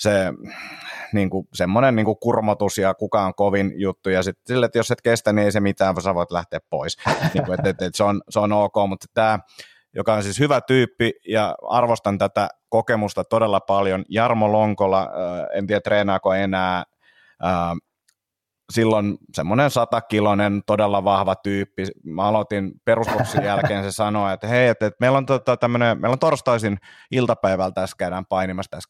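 Speech dulls and turns gritty in three stretches. The first runs from 5.84 to 8.70 s, after "kestä niin ei se" and ending before "mutta tämä joka on". The second runs from 13.56 to 16.50 s, after "ja arvostan tätä kokemusta". The third runs from 24.13 to 27.72 s, after "jälkeen se". Each is a Bluetooth SBC bit pool drop. The link starved the encoder of bits, which fits a bit pool falling from 28 to about 12, near 96 kbps. With so few bits, the top sub-bands were dropped and the rest coarsely quantised. On a spectrogram, the upper band goes dark and the remaining energy looks grainy and blocky until full bandwidth snaps back.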